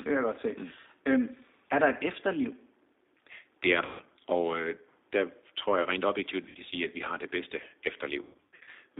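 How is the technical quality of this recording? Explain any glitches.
The recording is clearly degraded throughout by a low-bitrate telephone codec, with three dropout glitches.

Across the whole clip the speech sounds thin, boxy and slightly rough, with a faintly synthetic edge. That is the G.729 codec at 8 kbit/s. It doesn't carry the waveform itself. It sends a compact model of the voice, made of a vocal-tract filter, a pitch predictor and a few pulses per frame, and the decoder rebuilds speech from that model. The passband here runs from roughly 250 Hz to 3.7 kHz, so there are no deep lows or crisp highs, and the coding damage is plainly audible.

At 3.85 to 4.04 s, just before "og øh der tror", the speech smears into a brief, fading sound for about 150 ms. At 6.49 to 6.57 s, between "tror jeg rent objektivt" and "sige at vi har", a shorter 60 ms smear occurs. From 8.22 to 8.71 s the sound breaks up repeatedly, with 330 ms lost in bursts across 570 ms and the longest gap 120 ms. 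This is VoIP packet loss concealed by the speech codec. With no packets arriving, the decoder keeps extending its last pitch and filter while lowering the gain, and because each frame depends on the one before, the voice stays weak briefly after the gaps.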